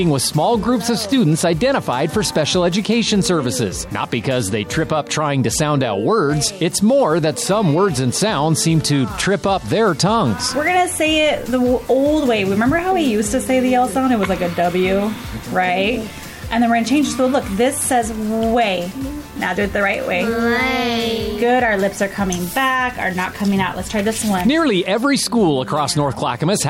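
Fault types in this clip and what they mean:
No technical faults are audible in this audio.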